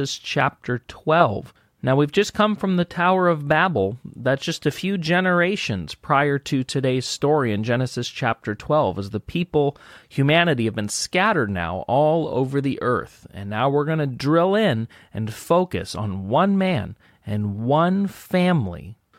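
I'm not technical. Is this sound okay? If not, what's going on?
Yes, this sound is okay, and there's nothing going on with it that needs fixing.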